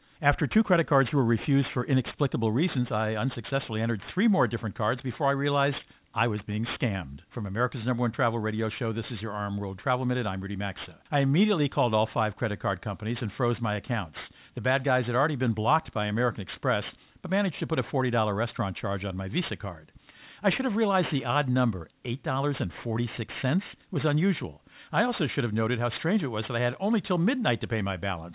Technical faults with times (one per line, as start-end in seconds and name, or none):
0.00-28.34 aliasing